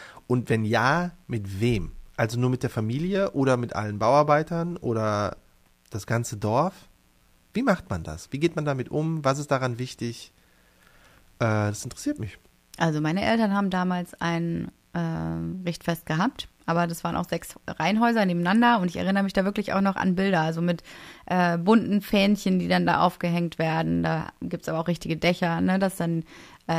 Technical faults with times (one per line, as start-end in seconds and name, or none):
0.00-26.78 mains buzz